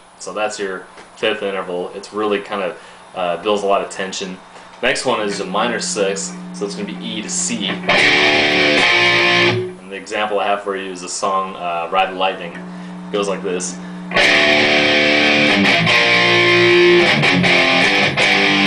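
Nothing in the signal stands out as a technical fault at any point in the audio.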